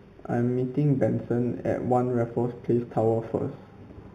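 Imaging from linear upsampling runs throughout. Straight-line interpolation, consistent with an 8 kHz source, leaves a faint mirrored band at 4 to 8 kHz, giving sibilants a metallic shimmer.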